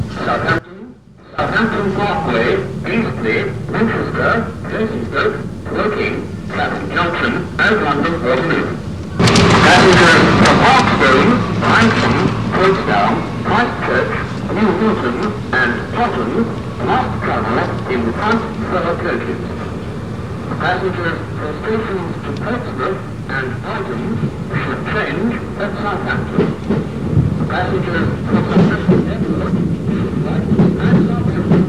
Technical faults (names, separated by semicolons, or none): DECT cordless phone buzz; one channel inverted